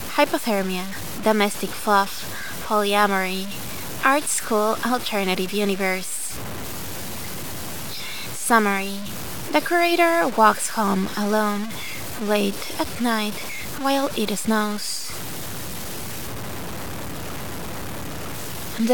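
Throughout the audio, there is grainy distortion that tracks the sound. It is heard as low bit depth without dither. The quietest passages break up or sputter. The error sits only about 15 dB below the signal. The likely cause is truncation to roughly 5 bits.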